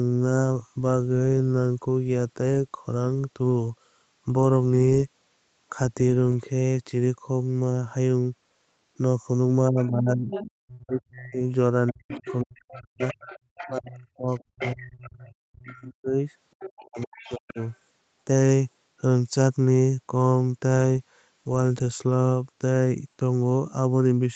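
The recording is speech on a call, with audio ending at 8 kHz, which fits an Opus link at about 32 kbps. From 9.7 to 16.14 s the talker's speech is suppressed in double talk. It dips and cuts out in pieces, by about 40 dB at its deepest, for around four seconds in total. It happens again from 16.79 to 17.58 s. The likely cause is an echo canceller that could not tell the talker from the loudspeaker echo, so it turned both down. In the same stretch, the other side's voice leaks through. It comes at 9.8 to 11.0 s, 11.87 to 13.78 s, 14.31 to 15.09 s, 15.64 to 15.73 s and 16.6 to 17.73 s. It sits about 10 to 25 dB below the talker. This is likely residual echo: the far end playing on a loudspeaker and not fully removed from the microphone.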